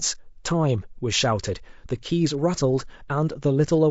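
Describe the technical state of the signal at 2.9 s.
At 2.9 s the speech carries the same damage heard across the whole clip: a rough, grainy texture with noise filling the gaps between the harmonics, plus a thinned, synthetic-sounding top end. That points to low-delay AAC compression, likely AAC-ELD at a rate around 32 kbps. Its very short frames can't separate the pitch harmonics cleanly, so at that bitrate the coder smears noise between them and approximates the highs.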